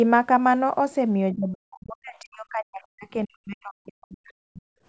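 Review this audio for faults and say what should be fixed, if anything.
From 1.33 s to 4.66 s the speech keeps dipping and chopping out, dropping by around 40 dB at worst. That's speech suppressed in double talk: the echo canceller likely confused this talker with far-end echo and ducked both. Better double-talk detection or a gentler suppressor would prevent it.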